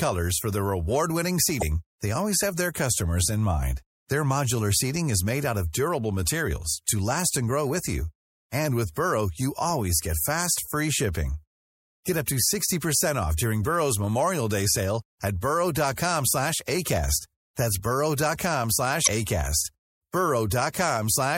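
MP3 compression runs through the whole speech clip. The treble sounds cut off and the sound has a watery, swirling quality, which likely comes from an MP3 encode at about 64 kbps. At that rate the encoder drops high frequencies and lets weak components flicker on and off between frames.

Damaged data in a compressed stream is heard first from 1.58 to 1.63 s as a brief glitch. Corrupted bytes there made the decoder misread frames, lose sync and jump to the next valid frame header.

A block of digital silence at 9.70 s lasts about 1.45 ms, which fits a 64-sample block of zeros written to the output. The abrupt drop to zero and back leaves a single tick.

Damaged data in a compressed stream returns from 19.03 to 19.08 s. It is the same kind of glitch as the decoder resynchronises past the bad frames.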